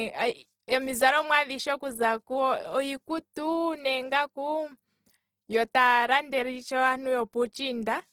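Right through the speech there's plainly audible Opus compression, likely in its music mode, with rough, grainy tones and noisy texture that fits a low bitrate around 16 kbps. At 3.33 s there's pre-echo: the codec smears quantisation noise ahead of a sharp attack, so you get about 18 ms of hiss before the onset softens it.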